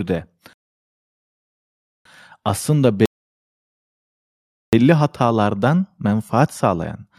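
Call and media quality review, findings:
Rebuffering stall, playback client: buffer ran dry, player paused awaiting download. Speech cuts to silence at 0.53–2.05 s (about 1.5 s added) and 3.06–4.73 s (about 1.7 s added), resuming exactly where it stopped; nothing lost, timing stretched.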